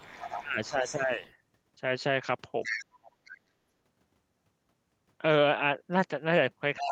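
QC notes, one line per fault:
0.0–1.32 s, 2.63–3.38 s and 6.76 s to the end: other side's voice leaking through. A second, far-end voice sits under the talker, roughly 15 dB down in the first stretch and about 10 dB down later. It is likely loudspeaker echo that the canceller failed to remove.
0.4–1.22 s, 2.74–2.88 s and 6.83 s to the end: speech suppressed in double talk. The talker dips by about 15 dB, and by about 25 dB in the brief middle dip, while the far end talks. This is likely the echo canceller turning both voices down together.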